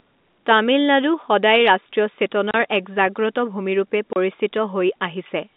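Packets went missing on the line and the receiver played silence in their place, so the speech breaks into two 30 ms holes with hard edges, at 2.51 s and 4.13 s. Each gap fits three lost 10 ms packets, inside the narrow G.711 telephone band.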